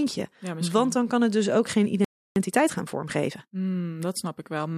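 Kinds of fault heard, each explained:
Playback stall: the player likely ran short of buffered data or had its output thread held up, so the speech breaks off just after "het dus ook geen" at 2.05 s and falls silent for about 0.32 s before resuming at 2.36 s.
Time-compressed catch-up: to clear the backlog the stall left behind, the player drops small slices of audio and cross-fades the joins, so from 2.36 to 3.62 s the speech runs 1.25 times fast at unchanged pitch.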